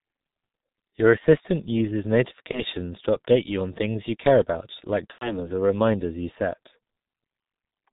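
Throughout the speech, the G.723.1 codec squeezes the sound into roughly 6.3 kbit/s with 30 ms frames. The result is heavily muffled and hoarse, with smeared consonants. A spectrogram shows nothing above 4 kHz, and the formants look blocky from frame to frame.

At 2.51 to 2.62 s, between "assistant uses" and "to update you on", VoIP packet loss concealed by the speech codec fills a gap that fits one lost 30 ms frame. The decoder repeats its last pitch and filter, producing a brief smear that fades. From 5.12 to 5.51 s, between "you care about like" and "or reminders you set", a longer gap fits about 90 ms of lost frames. That sound stretches and fades, is muted by the third lost frame, and stays weak afterwards. On a spectrogram these look like flat, repeated harmonic bands, and the waveform shows a decaying envelope.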